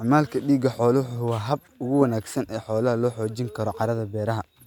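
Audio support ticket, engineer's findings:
No audible defects found in the speech recording on listening; no fault to attribute to any component, ticket can close.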